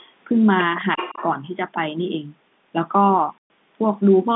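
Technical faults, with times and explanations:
0.97 to 1.26 s, echo leak: a delayed copy of the speech trails in about 346 ms behind and roughly 10 dB under the main signal. That's likely a loudspeaker on one end whose echo canceller let some of its own pickup slip back down the line.
3.38 to 3.5 s, packet loss filled with silence: the speech simply drops out for 120 ms, with hard edges going in and out. The missing packets were replaced with dead air, and the gap fits six 20 ms packets lost in a row.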